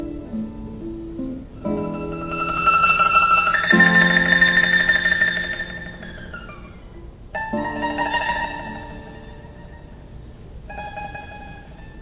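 The audio comes through a narrowband call path, with nothing above 4 kHz, which fits G.711 mu-law telephone coding. At 0.81 s a skip ahead drops roughly a fifth of a second; the waveform splices straight across with no gap or fill. From 1.37 to 1.77 s, a jitter buffer speed-up trims tiny pitch-period slices, about 50 ms in all, so that stretch runs 10% fast at unchanged pitch. A spectrogram shows its harmonics unshifted but compressed in time.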